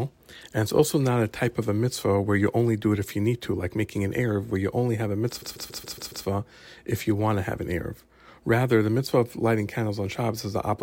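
Repeated frames, from 5.41 to 6.25 s after "you only have a": one 139 ms block of compressed audio plays again and again, a stutter adding 0.84 s.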